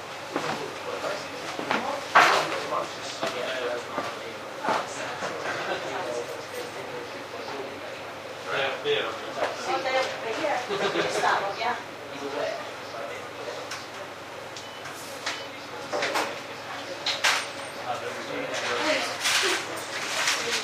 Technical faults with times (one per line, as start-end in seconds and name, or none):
none